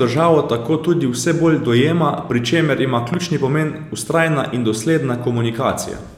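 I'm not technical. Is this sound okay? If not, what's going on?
No. There is a loud pop from 3.14 to 3.16 seconds, a single sharp click that stands out well above the speech while the talking carries on underneath it. A pop like this happens when a sudden jolt of electricity gets into the recording chain, likely from a cable being plugged in, a switch being flipped, a spark of static or a hiccup in the audio equipment, and the speaker reproduces that jolt as a thump.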